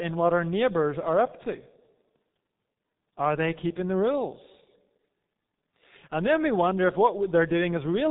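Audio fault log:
throughout G.723.1 codec: heavy low-bitrate coding, consistent with about 6.3 kbit/s, leaves the speech muffled and hoarse with smeared consonants. A spectrogram shows a hard ceiling at 3.8 kHz with nothing above, and harmonics that update in coarse, blocky frame-sized steps.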